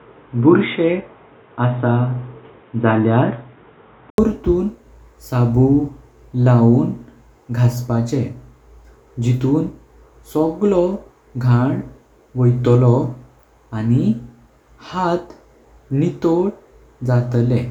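Input switched to a poorer device, from the start to 4.18 s: the speech in this opening stretch is dull and boxy, with nothing above 3.8 kHz, and a faint noise floor sits somewhere around 35 dB below it. At 4.18 s an 80 ms silence falls, after which the sound opens up and the level shifts by roughly 5 dB. That pattern likely comes from recording beginning on a narrower-band microphone or headset call profile before the system moved to the fuller input.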